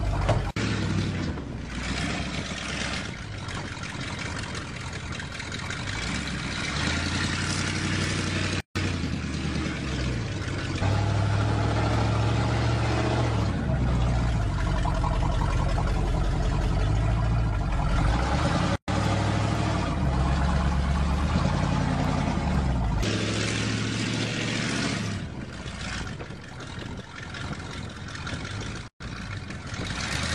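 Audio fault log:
8.60–8.76 s, 18.76–18.88 s, 28.88–29.00 s: gap at a join of encoded pieces, three of them, spaced 10 s apart, lasting 152 ms, then about 124 ms twice. Separately encoded chunks were stitched together with their start delay and end padding left in, so the sound drops to silence with slightly smeared edges and then resumes where it stopped.
8.93–30.16 s: periodic USB or driver dropouts, a tick every 0.499 s, roughly forty in all. Each time a background task stalls the bus or driver, and a tiny sliver of audio, well under a millisecond, is skipped outright. The splice leaves a small regular click whenever there's sound underneath.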